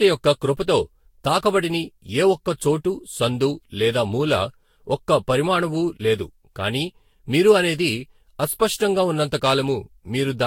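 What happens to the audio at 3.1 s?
At 3.1 s the speech sounds swirly, hollow and smeared, with blurred attacks and nothing above 16.7 kHz: generation loss, likely from around seven successive lossy re-encodings, present throughout.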